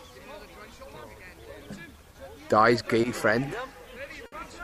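At 3.01 to 3.05 s there is a short stall from a late packet. A packet arrived late and the jitter buffer ran dry. The receiver stretched the last sound by about 20 ms, then resumed where it left off. Nothing is lost, but the sound hangs briefly. The same happens at 4.26 to 4.34 s, with about 60 ms of fill. That second hold is longer. Each stall pushes the rest of the audio later by the length of its fill.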